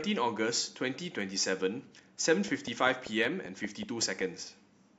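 From 2.48 to 4.22 s, a regular train of clicks, around ten at 5.2 per second and about 5 dB above the speech, ticks through, likely from equipment interference.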